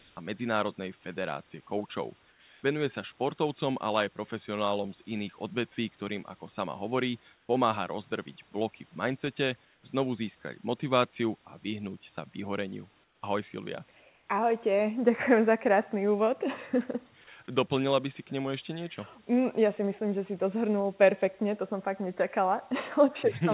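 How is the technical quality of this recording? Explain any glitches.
The main glitch is comfort noise in place of the background, in six short pauses: 0.0 to 0.17 s, 2.3 to 2.63, 7.34 to 7.49, 9.65 to 9.83, 13.04 to 13.22, and 14.0 to 14.27 s, each 150 to 330 ms. Between phrases the real room tone drops out and a flat, characterless hiss stands in, mostly about 1 to 5 dB quieter, once about 1 dB louder. It's likely discontinuous transmission: the sender goes silent when it detects no speech, and the receiver fills the gap with synthesized noise, so the background briefly loses its texture. The speech is band-limited with nothing above 4 kHz, which fits a G.711-style call codec.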